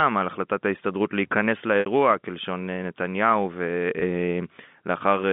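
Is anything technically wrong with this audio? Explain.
Yes. Packet loss with pitch repetition occurs at 1.80 s (about 60 ms lost) and 4.00 s (about 20 ms). The receiver bridges each gap by repeating the last pitch period. This produces a brief held, buzzy tone, longer at 1.80 s, within the 150 Hz to 3.6 kHz telephone band.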